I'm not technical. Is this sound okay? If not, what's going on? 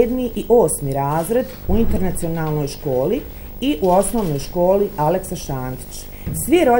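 No, there's a video or display buzz running the whole way through: a low, steady 50 Hz hum with gritty hash on top, plus a very high whine near 15.6 kHz. A screen or video cable is leaking into the audio, and the buzz sits under the sound.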